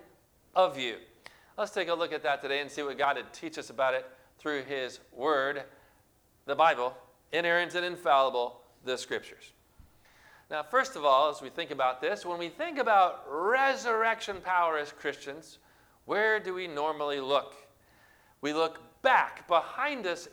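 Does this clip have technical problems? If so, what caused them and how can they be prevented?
Yes. Sample clock jitter runs through the whole clip: the converter's clock wanders by around a microsecond, so timing errors scale with waveform slope, adding roughness some 45 dB below the signal that swells on loud, bright passages. A low-jitter, well-isolated clock reference prevents it.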